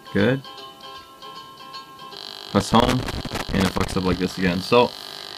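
Loose connector crackle runs from 2.60 to 4.14 s: a worn or dirty contact keeps making and breaking as it shifts, so the audio is chopped into fragments, with pops where any DC on the line jumps, heard as an irregular scratchy burst across that stretch.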